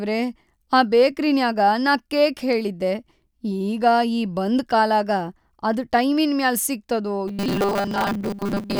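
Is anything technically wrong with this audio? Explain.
Yes. From 7.28 s to the end at 8.79 s there is robotic sound from repeated short buffers, likely from audio arriving too seldom, so a 5 ms chunk is replayed for most of that stretch. That repetition imposes a fixed 200 Hz buzz, turning the speech metallic and rigid.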